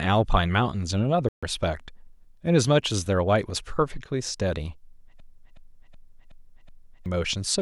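At 1.29 s the speech cuts to silence for about 140 ms, until 1.43 s. This is a Bluetooth dropout, likely caused by audio packets failing to reach the headphones in time, and the gap length suggests roughly six packets were discarded. Unlike a freeze, nothing repeats: the sound simply vanishes and returns further along, as though the speech kept running unheard.

From 5.20 s to 7.06 s a system hang loop takes over. The computer or its driver stalled while the sound hardware kept replaying its ring buffer, so one 371.5 ms fragment plays five times in a row at about 2.7 Hz, which fits a 16384-sample buffer. The exact repetition is what separates it from a dropout. When the sound recovers, roughly two seconds of speech are missing.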